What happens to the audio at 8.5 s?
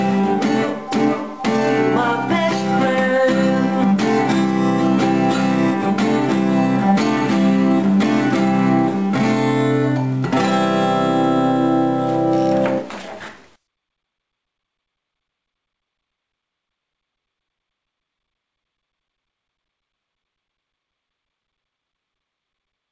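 Nothing goes wrong at 8.5 s: the sound continues intact through that moment, carried by a call path that keeps it within the band up to 8 kHz without any dropout, glitch or interruption.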